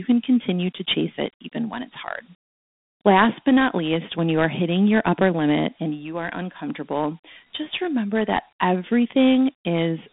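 Throughout the clip, the speech has passed through Dialogic VOX ADPCM, the Dialogic (OKI) 4-bit adaptive scheme used for phone menus and voicemail. The coarseness fits a 32 kbps stream. Each sample stores only a small step from a predicted value, so the waveform is rebuilt roughly, and a gritty hiss rides along with the speech, plainly audible. The sound is confined to a telephone band of about 150 Hz to 3.6 kHz, with nothing above 3.8 kHz, so it is thin and muffled.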